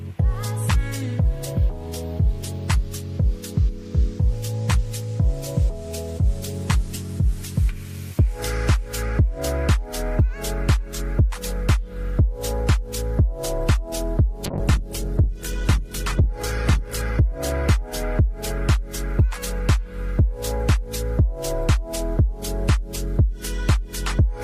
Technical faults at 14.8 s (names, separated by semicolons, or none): call bitrate drop